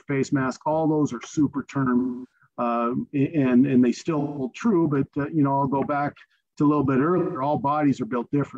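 Three smeared, noisy patches interrupt the sound at 1.98 to 2.32 s, 4.19 to 4.45 s and 7.18 to 7.41 s. This is AAC frame loss with concealment: the decoder patched each gap, about 256 ms then roughly 171 ms twice, from the last good spectrum.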